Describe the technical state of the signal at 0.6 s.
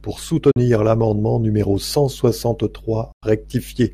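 Audio packets were most likely late reaching the Bluetooth headphones and were discarded, causing a Bluetooth dropout from 0.51 to 0.57 s, just before "l’amendement numéro cent". The speech cuts to silence for about 44 ms, consistent with three lost packets, and then resumes further along.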